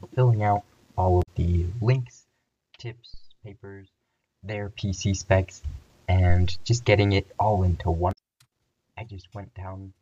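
At 1.19 s the sound breaks into a short disturbance lasting about 0.1 s, the signature of damaged data in a compressed stream: corrupted bytes make the decoder misread frames, lose sync and resume at the next frame header. The same disturbance returns at 8.09 s for about 0.09 s. At 3.14 s a deep phantom power thump occurs, caused by a supply being switched on a live input and the voltage step passing through the coupling capacitors. It decays over roughly 62 ms, with low-frequency energy trailing to 3.41 s.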